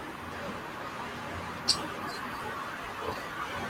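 No technical faults are audible anywhere in the speech recording.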